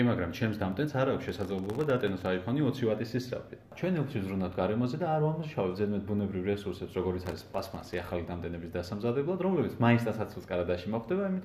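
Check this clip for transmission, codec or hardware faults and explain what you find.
Two bursts of processor overload crackle, from 1.29 to 2.26 s and from 7.26 to 8.01 s. The processor repeatedly missed its deadlines for very short buffers, under a millisecond each, dozens of times, dropping each to silence. The hard-edged micro-gaps merge into a gritty crackle that stops when the load eases.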